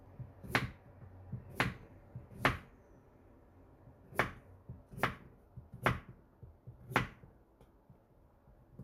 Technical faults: none

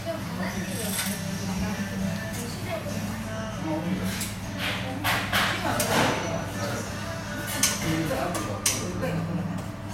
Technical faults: none

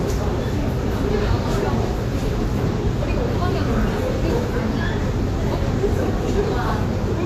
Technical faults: Vorbis compression

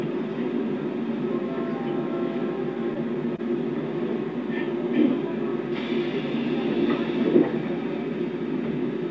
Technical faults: short stall from a late packet

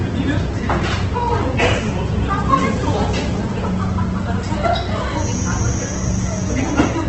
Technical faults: Opus compression; feedback whistle

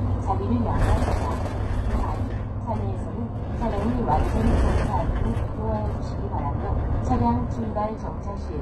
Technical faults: HE-AAC compression

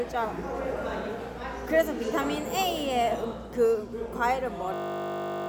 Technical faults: system hang loop

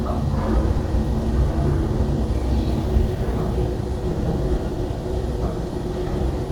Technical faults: lost LE Audio frames

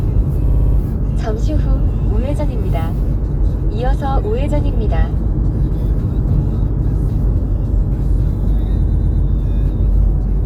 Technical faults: repeated frames

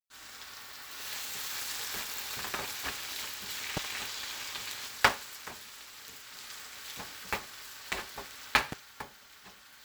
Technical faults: buffer tearing; loud pop

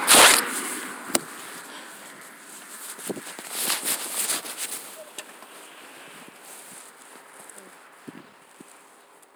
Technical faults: none

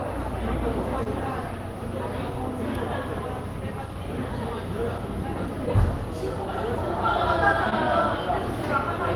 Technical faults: short concealed packet loss

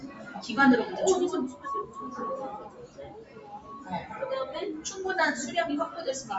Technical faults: noise suppressor applied to music or sounds; sound cut by the noise suppressor

